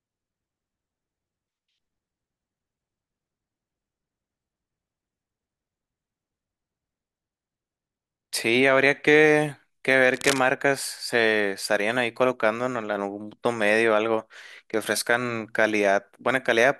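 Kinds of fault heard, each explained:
Cable scratch noise: A burst of dense, uneven scratching sits over the speech from 10.14 to 10.39 s. It is at about 5 dB below the speech level. The likely cause is a worn cable or connector being moved, so its contact resistance flickered rapidly.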